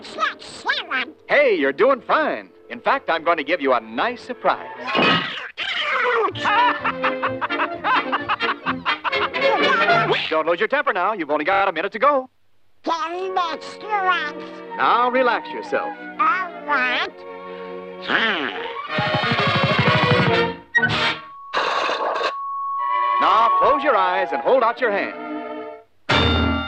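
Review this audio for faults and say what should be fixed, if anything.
Repeated frames at 11.52 to 11.62 s. One short slice of compressed audio was decoded and played again four more times, so the same fragment stutters in quick succession. The slice length of 24 ms fits a single codec frame being duplicated, and the repeats add 96 ms to the running time. To prevent it, make the writer or transport discard duplicate frames by checking sequence numbers or timestamps before decoding.

Loudspeaker feedback squeal from 21.04 to 24.05 s. A pure tone at 1.1 kHz rises out of the sound over roughly two seconds and settles as a steady squeal a few decibels louder than everything else. The microphone was picking up the loudspeaker it fed, and at 1.1 kHz the loop gain exceeded one, so that frequency kept reinforcing itself until something limited it. To prevent it, lower the monitor gain or move the loudspeaker out of the microphone's pickup pattern, and add a narrow notch at 1.1 kHz if needed.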